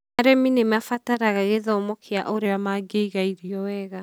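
From 2.46 to 3.49 s, after "mabataraga gĩthomo kia", speech slows 6.3% and drops about a semitone, then snaps back. This is a fixed step rather than wavering wow, so it is likely a drift correction step.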